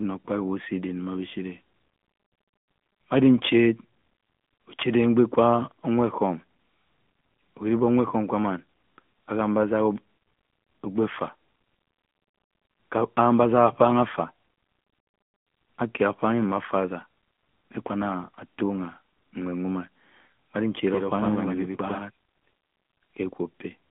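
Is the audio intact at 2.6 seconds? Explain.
No. At 2.6 seconds, as across the whole clip, the speech carries plainly audible AMR narrowband mobile codec damage. The band runs only from about 150 Hz to 3.4 kHz, with nothing above 3.6 kHz, so the voice sounds thin, boxy and buzzy. That texture fits a higher-rate mode near 10 kbps, where a few coded pulses per frame drive a vocal-tract model. A spectrogram shows a flat ceiling near 3.6 kHz and an empty strip below 150 Hz.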